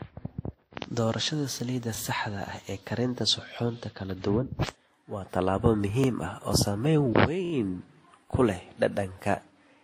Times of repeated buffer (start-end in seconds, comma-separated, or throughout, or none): 1.95-1.97, 6.04-6.06, 7.45-7.52